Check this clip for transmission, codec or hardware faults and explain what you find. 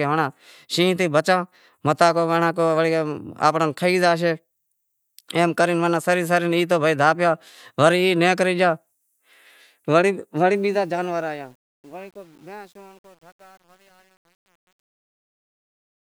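One fault appears, on the closing fade-out of the speech. From 10.55 s to 16.07 s, and worst after 11.44 s, the tail grows gritty. This is truncation distortion on a fade: the fade is processed without dither at a resolution that fits about 9 bits, so the quietest samples collapse into coarse square steps.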